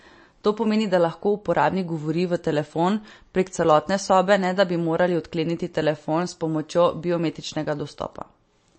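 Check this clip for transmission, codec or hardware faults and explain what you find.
There's one fault, and it runs through the whole clip: plainly audible MP3 compression on the speech. Nothing comes through above 8.3 kHz, and the speech has a watery, swirly edge from weak frequency lines flickering on and off between frames. That points to a low bitrate around 36 kbps, with the encoder likely running short of bits, cutting the treble and dropping quieter detail.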